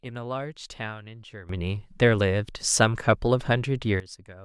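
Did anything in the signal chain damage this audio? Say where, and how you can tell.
Yes. At 1.49 s the speech and its background noise leap together by about 16 dB and stay raised until 4.0 s, then drop back. That is a sudden gain jump, likely a digital gain setting applied in the driver or processing stage without any ramp.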